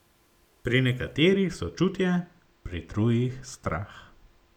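From 1.15 s to the end the speech sounds dull, its top end thinned. The cause is channel delay (comb filtering): one channel lags very slightly, which fits roughly two samples, so the mono sum cancels in evenly spaced notches, the first near 10 kHz.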